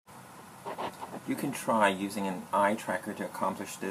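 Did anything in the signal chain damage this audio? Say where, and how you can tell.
No, nothing in the signal chain damaged this speech.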